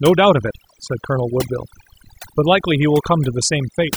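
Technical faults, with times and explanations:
Throughout, overdone noise removal: the noise reduction is pushed too hard, shutting down individual frequency bands wherever they sit close to its noise estimate, so the background drops and breaks up into twinkling specks while softer parts of the speech vanish.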